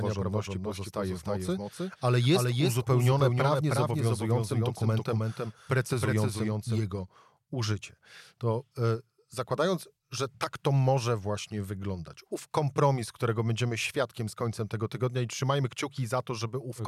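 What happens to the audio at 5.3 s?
A doubled audio track runs from the start of the clip until it cuts off abruptly at 6.78 s. A second full-band copy of the speech trails roughly 300 ms behind, a few decibels quieter, with no decay or room colour, likely from a slower second capture path.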